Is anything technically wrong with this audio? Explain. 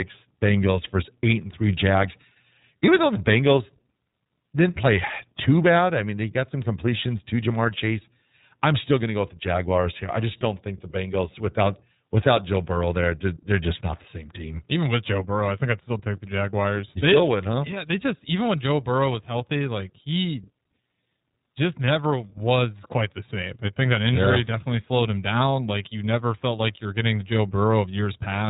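Yes, the whole clip has been through the iLBC codec, and the damage is plainly audible. It's a narrowband VoIP coder: the speech is cut off at about 3.8 kHz, so it sounds boxy and phone-like. Each 30 ms frame's excitation is coded on its own, without borrowing from the previous frame, which gives the voice a slightly rough, synthetic grain. The 30 ms framing fits iLBC's 13.33 kbps mode.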